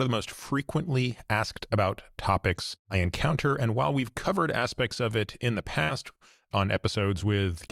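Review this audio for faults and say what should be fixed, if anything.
At 5.83 to 5.92 s the sound briefly freezes into a held, fading continuation, then jumps ahead. This is a burst of packet loss: consecutive packets arrived too late or not at all, the receiver stretched the last audio for about 52 ms while turning it down, and roughly 60 ms of material never returned. Adding jitter-buffer headroom and forward error correction on the link would keep a short loss burst like this from cutting out audio.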